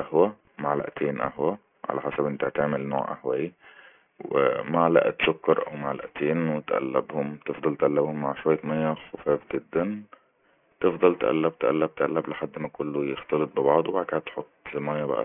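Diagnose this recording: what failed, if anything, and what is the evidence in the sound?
Throughout the speech, sibilants turn gritty and metallic, with spurious tones crowding up against a hard ceiling near 3 kHz at roughly 15 dB below the signal. This is aliasing from a sample-rate conversion step: downsampling without an anti-alias filter, consistent with 48 kHz to 6 kHz, folded everything above 3 kHz back into the band.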